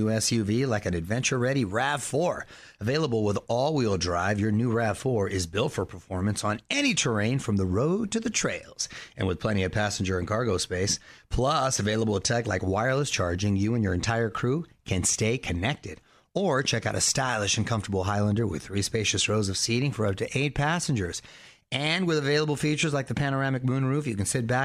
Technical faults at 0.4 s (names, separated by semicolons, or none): none